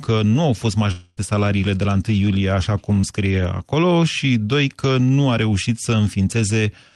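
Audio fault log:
0.91–1.19 s, long network dropout: For about a quarter of a second the sound is replaced by a synthetic continuation of what came just before. It starts as a buzz or hiss extending the last sound and thins into a fading smear, with no stretch of true silence. This is likely a gap of roughly 260 ms in which no audio reached the receiver. The receiver's concealment stretched the last sound across the whole hole, and the audio then resumes further along, with the missing portion gone.
3.01–3.05 s, short concealed packet loss: A brief wobble breaks the sound for a moment, lasting only a few hundredths of a second. About 20 ms of audio arrived too late for the decoder to use. The receiver patched the gap by extrapolating from the preceding sound and then crossfaded back into the real signal. That join is heard as a small smear or wobble rather than a dropout, set against the Opus call path's coding noise and its top end cut off near 12 kHz.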